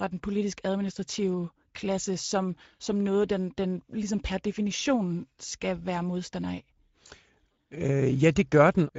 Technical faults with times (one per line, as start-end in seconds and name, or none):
0.00-8.99 Speex codec